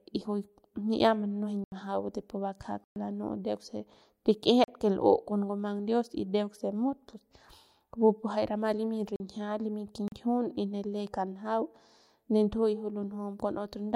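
The speech drops out five times in blocks of digital silence: 1.64 to 1.72 s (80 ms), 2.84 to 2.96 s (120 ms), 4.64 to 4.68 s (40 ms), 9.16 to 9.20 s just after "pu jay rama limy", and 10.08 to 10.12 s just before "ne le kanjau". Each time the sound cuts out and back with no fade, and the gap itself is a short hole. On the waveform these are flat lines. On a spectrogram they are empty vertical slots.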